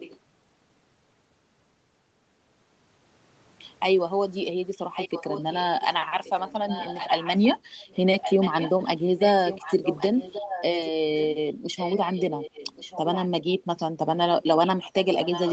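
A faint echo leak opens the clip from 0.0 to 0.19 s, and the leak returns from 4.75 to 7.47 s, 7.81 to 11.37 s, 11.76 to 13.86 s and 14.39 s to the end. A delayed copy of the speech trails about 1.13 s behind, roughly 10 dB below the direct sound in most stretches, weaker near 12 to 14 s. This is likely a far-end loudspeaker pickup that the echo canceller failed to suppress.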